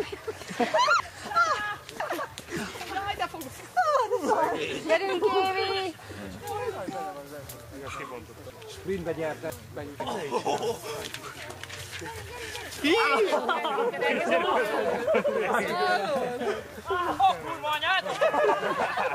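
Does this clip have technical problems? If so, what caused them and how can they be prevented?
Yes. Chunks out of order: a 500 ms chunk arrived two chunks late and plays after the two that should follow it, from 1.0 to 2.5 s and again from 8.5 to 10.0 s. No audio is lost, but each passage sounds jumbled, with three hard joins. Numbering each chunk and reordering them in a buffer before playback would prevent this.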